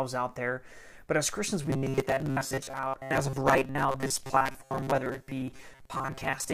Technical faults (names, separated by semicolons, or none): robotic sound from repeated short buffers